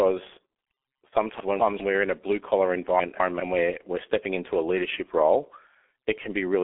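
From the first moment to the last, the speech is carried by the G.723.1 codec, a low-rate telephony coder that fits about a 6.3 kbit/s setting. Its 30 ms frames smear consonants and leave a hoarse, boxy tone. Nothing comes through above 3.8 kHz, so everything sounds muffled.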